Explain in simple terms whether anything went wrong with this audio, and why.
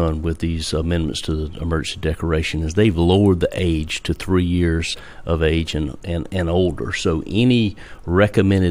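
Something went wrong once. At 4.93 to 4.95 s there is a brief glitch in the speech. This is damaged data in a compressed stream. A tiny piece of the file was corrupted, so the player misread it and stumbled until it found its place again.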